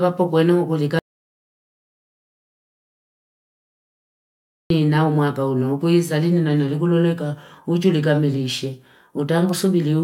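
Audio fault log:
0.99–4.70 s, audio dropout to silence: the speech cuts off abruptly at 0.99 s and the signal falls to silence, with no room tone or noise floor, until speech resumes mid-flow at 4.70 s. About 3.7 s of speech is missing entirely. The dead-flat gap points to a likely loss of the input, such as a disconnected device, a failed link or a stray mute, while recording continued writing silence.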